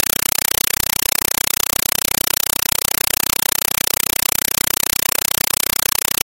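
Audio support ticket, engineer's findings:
Compressed stream played as audio, throughout. Loud chattering static, 5.33 ms noise bursts at 31.25 Hz. Receiver not decoding; AC-3 frames, likely around 256 kbps, output as raw PCM.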